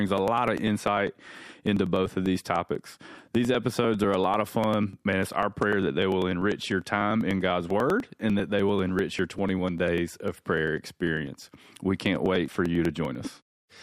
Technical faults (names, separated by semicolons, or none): periodic USB or driver dropouts